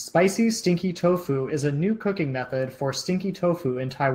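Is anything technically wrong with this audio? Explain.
Yes. A call bitrate drop runs from 0.89 to 3.09 s. The bandwidth estimate fell, so the encoder was given fewer bits and coded the speech more coarsely, which fits a fall from around 32 to 17 kbps. For about 1.6 s the speech sounds rougher and watery.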